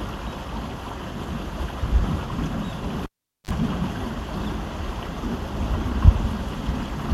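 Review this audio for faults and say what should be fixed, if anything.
A cable pulled and plugged in runs from 3.04 to 3.51 s. A pop marks the live lead coming out, then 421 ms of near silence follows. Next comes 41 ms of 50 Hz mains buzz while only the tip touches, and a second pop as the sound returns. The waveform shows two sharp spikes around a flat gap. The spectrogram shows full-height vertical lines at each pop, with 50 Hz harmonics stacked just before reconnection. Mute the channel before touching connectors, and secure cables so they can't be unplugged while live.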